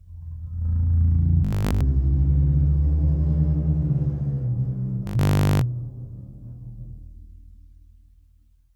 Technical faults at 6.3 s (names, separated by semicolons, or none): none